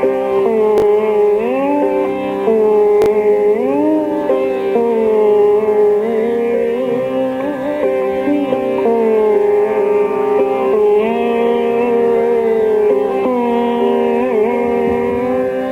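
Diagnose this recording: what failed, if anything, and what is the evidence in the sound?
Chunks out of order at 0.78–0.82 s and 3.02–3.06 s: a 20 ms block played one block late, swapped with its neighbour, giving a brief jumbled moment at the driver or buffer stage.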